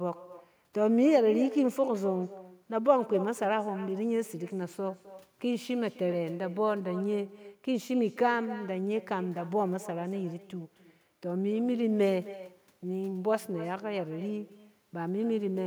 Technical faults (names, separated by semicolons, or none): echo with no canceller